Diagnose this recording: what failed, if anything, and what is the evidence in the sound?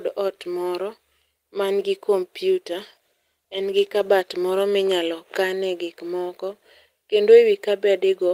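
Call bitrate drop at the codec: from 2.75 to 4.95 s the speech turns rough and muffled, which fits a fall from 40 to 18 kbps.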